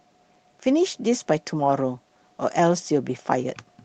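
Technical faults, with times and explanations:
No technical faults are audible anywhere in this speech.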